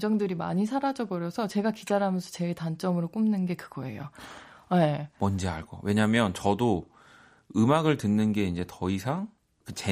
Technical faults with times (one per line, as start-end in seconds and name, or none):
none